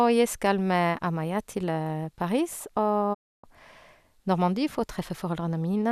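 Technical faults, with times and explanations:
3.13–3.45 s, digital broadcast dropout: the sound fades out over about 20 ms and goes silent for roughly 0.29 s while the receiver mutes on bad frames, then picks up later.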